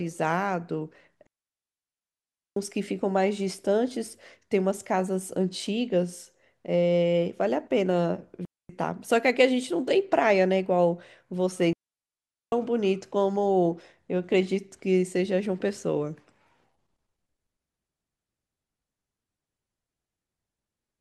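A digital wireless link carrying this speech loses too much data three times, and each time the receiver mutes with a very short fade. The result is a digital wireless dropout: clean holes of near silence at 1.27–2.57 s, 8.45–8.69 s and 11.73–12.52 s, with no noise burst on either side.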